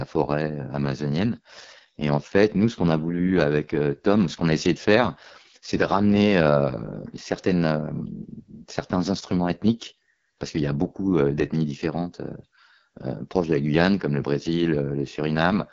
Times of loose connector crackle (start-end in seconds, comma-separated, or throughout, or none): none